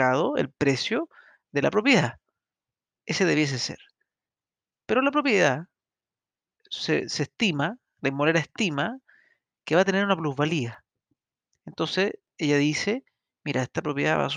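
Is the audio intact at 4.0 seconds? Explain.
No, 4.0 s lies within periodic USB or driver dropouts from 0.75 to 13.74 s. Every 1.0 s a driver stall skips a fraction of a millisecond, heard as regular ticks.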